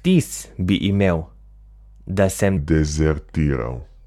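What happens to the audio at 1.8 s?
Nothing goes wrong at 1.8 s: the speech runs through that moment intact, with no dropout, click or other fault.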